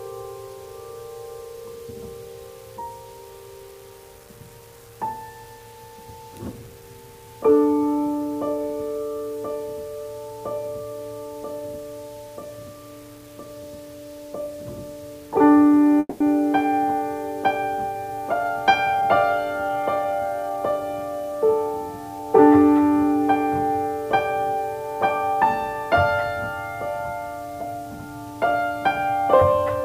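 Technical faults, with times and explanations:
Throughout: low bit depth without dither. A grainy distortion follows the sound's own shape, roughening quiet passages and making the faintest parts sputter or drop out, with error around 30 dB below the signal. This fits coarse rounding to roughly 8 bits with no dither, so the error tracks the signal.
15.99 to 16.22 s: call audio freeze. The last sound is stretched into a fading buzz or hiss for about 210 ms, ending in roughly 30 ms of silence. Playback then resumes where it stopped with nothing lost, which points to late packets likely emptying the jitter buffer, adding a 210 ms delay.
18.10 to 19.03 s and 19.69 to 20.73 s: jitter buffer speed-up. The audio briefly runs fast at unchanged pitch, at 109% and then 111%, sounding hurried. The receiver cuts many short pitch-period slices, roughly a tenth of a second in total each time, to shed excess buffered delay.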